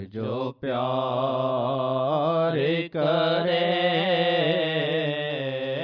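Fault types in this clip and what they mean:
No fault types can be heard in this clip.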